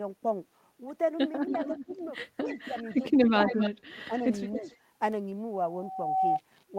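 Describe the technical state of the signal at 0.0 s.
At 0.0 s the speech signal is intact, with no audible fault at that moment.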